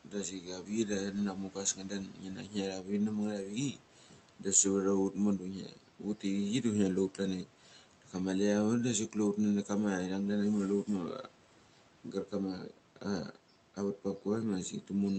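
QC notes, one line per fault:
0.05–13.37 s, speech cut by the noise suppressor: six dips, at 0.05–4.46, 5.11–6.24, 7.1–8.14, 9.09–9.7, 10.84–11.31 and 12.04–13.37 s, each dropping speech by about 11–13 dB at its deepest. The suppressor mistakes low-level speech for the room noise, which sits about 22 dB below the voice, and attenuates both together, so soft consonants and word endings go faint or swallowed. The first stretch is worst, with roughly three seconds affected.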